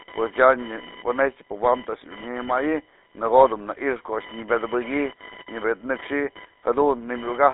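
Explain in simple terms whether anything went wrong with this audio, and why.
Computer activity noise runs from start to finish. It is a fine, rapid buzz, roughly a thousand pulses a second, quieter than the speech. When the computer's processor, graphics card or mouse changes how much power it draws, the electrical ground it shares with the audio circuit shifts, and that wobble leaks into the recording. The buzz follows what the computer is doing, not the speech.

The GSM full-rate codec also affects the whole clip, and its damage is plainly audible. This early mobile-phone coding system keeps only the range a phone line carries, from about 300 Hz to 3.7 kHz, with nothing above 3.8 kHz, so the speech sounds narrow and muffled. It rebuilds the voice from a simple model driven by evenly spaced pulses, which gives it a gravelly, buzzy roughness.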